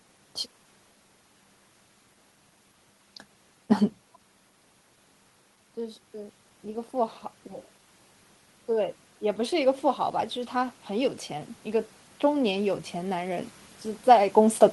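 The automatic gain control in this speech recording decided its input was too quiet and began raising its gain, an automatic gain rising fault that runs from 8.74 s to 13.53 s and adds about 8 dB by the end. Because the gain is applied to the whole signal, the voice and the room noise swell together, slowly, over nearly five seconds. The level shifts near 4 s and 14 s sound instead like the talker moving relative to the microphone.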